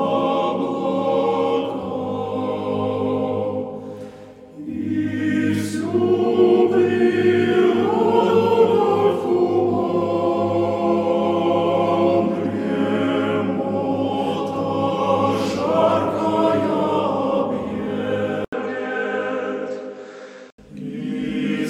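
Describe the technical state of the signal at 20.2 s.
At 20.2 s the sound is dull and narrowed, within 18.45 to 20.58 s, likely because the input switched to a poorer device. A spectrogram shows nothing above 8 kHz and a noise floor about 50 dB down. The waveform shows an 80 ms gap at 18.45 s, with similar level.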